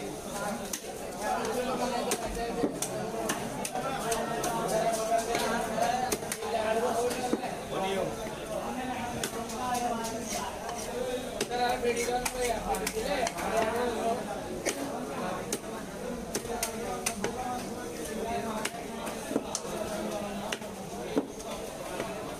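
No faults can be heard anywhere in the recording.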